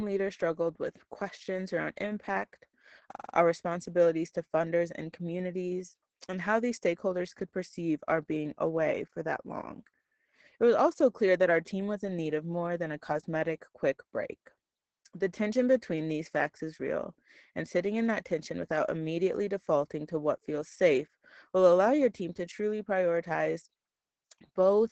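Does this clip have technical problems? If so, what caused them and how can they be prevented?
Yes. Throughout the speech there is Opus voice compression, with the SILK coder running at about 10 kbps in wideband mode. Nothing reaches above 8 kHz, and the coarse excitation coding makes the speech muffled, hoarse and faintly robotic. A plain low-pass filter would dull the sound without adding this roughness. Encoding at a higher bitrate, around 24 kbps or more, prevents it.

From 3.11 to 3.34 s there is a system hang loop. One 46 ms slice repeats exactly five times, giving a stutter at 21.5 Hz, which fits a 2048-sample buffer cycling while the system froze. Packet-loss concealment would fade and vary the sound, but these repeats are identical. Little or no audio seems to be lost. Fixing driver or CPU stalls, or using a watchdog that mutes a stalled buffer, prevents it.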